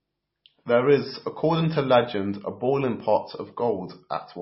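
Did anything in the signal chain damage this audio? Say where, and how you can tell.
Yes, at the codec stage, likely heavy MP3 compression, pointing to a very low bitrate near 24 kbps. Throughout the speech nothing remains above 5.6 kHz, where the encoder cut the treble, and starved frequency lines flicker between frames, giving a watery, swirly texture and smeared consonant attacks.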